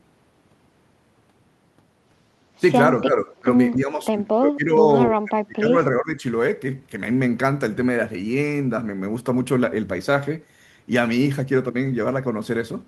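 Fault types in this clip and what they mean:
Speech suppressed in double talk: the speech gets pushed down in four patches, at 3.03 to 3.48 s, 3.76 to 4.14 s, 4.37 to 4.87 s and 5.09 to 6.23 s. The deepest dips range from roughly 10 dB to around 30 dB, and the last one holds for about a second. That's likely an echo canceller that couldn't tell this talker apart from the far end's echo while both sides were talking, so it turned everything down.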